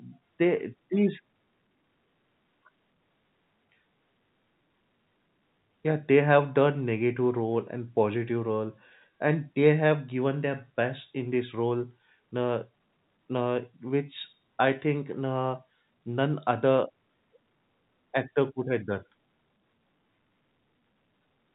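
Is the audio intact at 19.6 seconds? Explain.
Yes, the speech at 19.6 seconds is intact, with nothing there beyond the ordinary narrowband character of G.711 telephone coding.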